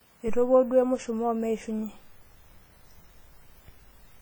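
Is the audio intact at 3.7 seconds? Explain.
No. At 3.7 seconds, as throughout, the speech shows low-bitrate audio saved at a high bitrate, likely a roughly 32 kbit/s WMA stage re-encoded as 320 kbit/s MP3. It sounds smeared and watery. A spectrogram shows patchy, holed high bands up to a 20.2 kHz ceiling.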